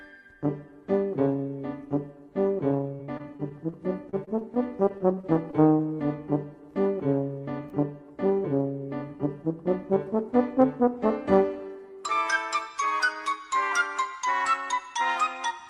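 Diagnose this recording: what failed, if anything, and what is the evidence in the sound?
Repeated packet loss (robotic sound) at the network stage, in two bursts: 2.95 to 3.74 s and 4.10 to 5.81 s. Each burst is a rapid string of short holes, the longest about 36 ms in the first and 29 ms in the second. The receiver patches each hole by extending the last good sound, so the audio turns choppy with pieces missing. Concealment covers roughly 17% and 13% of those spans. A spectrogram shows frozen, smeared frames with hard vertical seams, and the waveform shows repeated cycles and abrupt envelope breaks.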